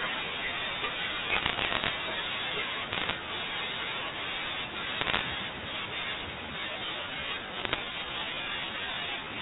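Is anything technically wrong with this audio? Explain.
Yes, two things. There are bit errors on a digital phone line, heard as bursts of sharp ticks and crackle from 1.30 to 1.90 s, 2.92 to 3.15 s, 5.01 to 5.21 s and 7.58 to 7.79 s. Flipped bits, around one in a hundred, each corrupt a single sample of the G.711 mu-law stream, so the speech underneath stays intact apart from the narrow phone band.

From 6.42 s to the end there's a time-stretched section. The pace abruptly drops to about 0.73 times normal while the pitch holds. That's likely software repeating short slices of audio to lengthen it without shifting pitch.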